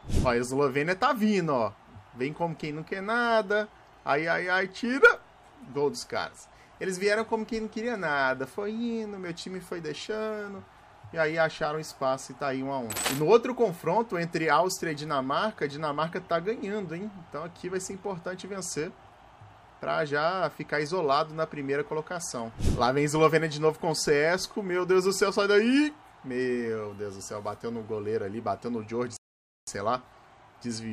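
At 29.17 s the audio stops dead and stays silent until 29.67 s, a rebuffering stall lasting about half a second (506 ms). The player drained its store of downloaded audio and had to wait for more data before continuing. When playback resumes, it picks up at exactly the point where it broke off, so no material is skipped or repeated; the only effect is an inserted gap that stretches the running time.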